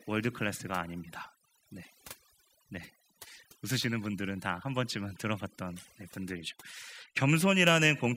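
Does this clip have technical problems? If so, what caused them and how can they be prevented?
Yes. Overdone noise removal runs throughout the speech. A noise reducer set too aggressively pulls individual frequency bands near its noise estimate down to almost nothing, taking quieter voice detail with them, leaving near-silent gaps with twinkling specks. Prevent it by using gentler reduction settings and checking the result by ear.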